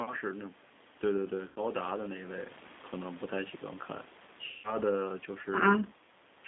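Throughout, the speech carries plainly audible G.729 codec damage at 8 kbit/s, confined to roughly 200 Hz to 3.6 kHz, with a rough, synthetic texture from the low-rate model. At 1.48 s and again at 4.46 s, VoIP packet loss concealed by the speech codec removes 80 ms, then 180 ms, of audio. The decoder stretches the last sound into a fading buzzy tone or coloured noise, and the audio stays weak until 1.60 s and 4.78 s.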